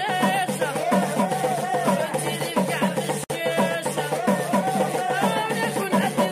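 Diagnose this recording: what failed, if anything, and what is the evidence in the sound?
The failure sits at the codec stage: a gap at a join of encoded pieces. At 3.24 s the sound stops for about 60 ms and resumes at 3.30 s, picking up exactly where it left off, with edges smeared by the codec. Two separately encoded segments were joined without trimming the encoder's start-up delay and last-frame padding. Unlike a network dropout or buffer underrun, nothing is missing from the material, and the silence occurs once, not periodically.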